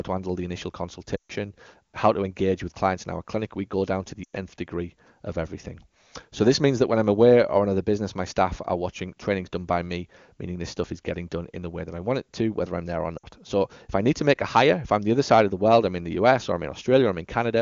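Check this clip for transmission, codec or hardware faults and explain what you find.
Three short dropouts of the lost AMR speech frames kind are audible, at 1.15 to 1.32 s, 4.24 to 4.36 s and 13.18 to 13.26 s. Around them, the wideband AMR coding sounds clean, consistent with one of its highest rates.

Lost AMR speech frames: Radio errors corrupted consecutive frames, and the decoder filled each gap by repeating the last good pitch and spectral envelope while ramping the gain down. The first gap lasts about 140 ms, fitting seven 20 ms frames; the others last 100 ms and 60 ms. Each sounds like a smeared, held fragment that fades quickly toward silence, followed by a brief weak, rough onset as decoding recovers.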